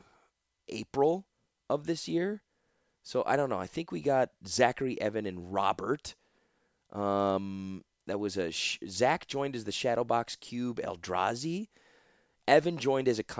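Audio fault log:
7.2 to 9.5 s, resampler restarted on every block: a steady tick ten times per second rides on the speech, ending just before "as the". Each 100 ms block was converted from 24 kHz to 16 kHz alone, so every block edge lacked its true neighbouring samples and carries a small error.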